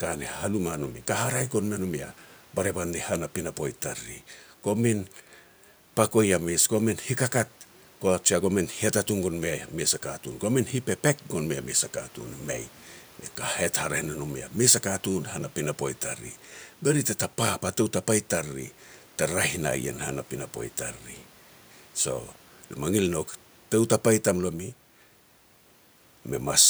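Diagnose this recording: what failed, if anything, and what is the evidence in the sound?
Nothing failed in this recording; the only thing in the sound besides the speech is the room's own background noise, sitting about 34 dB below the speech.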